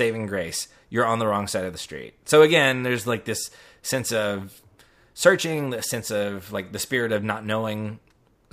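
A speech clip with clock slip clicks running nearly the whole way through, from 0.15 s to 8.47 s: a faint, regular ticking about every tenth of a second, around a hundred ticks in all, heard most on the louder, sustained stretches. The likely cause is two devices on free-running clocks, off by something like 300 ppm, so a single sample gets dropped or repeated each time the drift adds up to a full sample.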